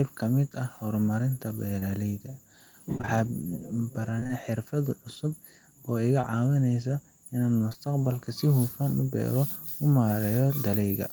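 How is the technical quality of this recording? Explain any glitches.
The recording has network dropouts: a handful of brief concealed losses and two short choppy patches.

Short concealed packet loss shows up at 1.79 s, 6.21 s, and then twice back to back at 7.69 s and 7.73 s. Each time roughly 20 ms of audio didn't reach the decoder in time, which fits a single lost packet. The receiver patched each gap by extending the previous sound and then crossfaded back into the real signal. You hear a quick smear or wobble.

Repeated packet loss, with that robotic sound, hits from 2.98 to 3.10 s and from 4.20 to 4.31 s. Within each of those tenth-of-a-second stretches there are three separate holes, none longer than about 23 ms, and about half the span ends up being synthesised fill rather than real audio. Because each patch barely finishes before the next gap starts, the speech turns choppy, with fragments missing.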